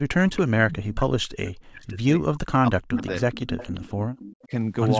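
From 0.00 to 0.15 s the sound drops away sharply, by roughly 40 dB. This is speech suppressed in double talk: the echo canceller, unable to separate its own talker from the returning loudspeaker sound, likely turned everything down while the far side spoke.

From 0.18 to 1.28 s a faint duplicate trails the sound by 277 ms, about 15 dB below it. This is echo leak, likely loudspeaker sound reaching the microphone that the canceller did not fully remove and sent back.

The same deep dip of double-talk suppression cuts in briefly from 0.49 to 0.54 s, then again through much of 1.32 to 3.04 s.

The echo returns louder from 2.92 to 4.47 s, now about 10 dB down at the same 277 ms delay.

A shallower suppression dip of about 15 dB follows from 4.46 to 4.52 s.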